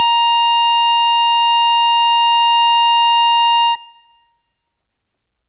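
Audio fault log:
No fault is heard in this music clip.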